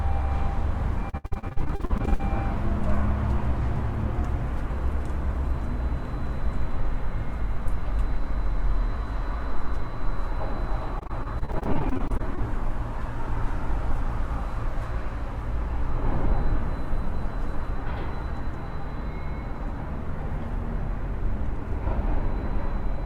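From 1.09 to 2.21 s and again from 10.99 to 12.39 s, repeated packet loss gives a robotic sound: many short holes, up to 68 ms then 26 ms, are patched by stretching the last sound. Unlike a single dropout, the gaps recur rapidly, producing choppy stutter.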